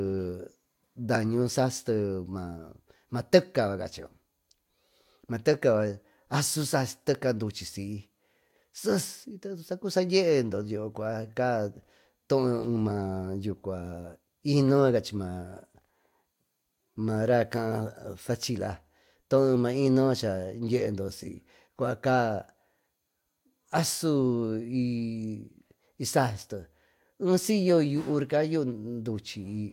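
No technical faults can be heard anywhere in the recording, with the signal holding steady throughout.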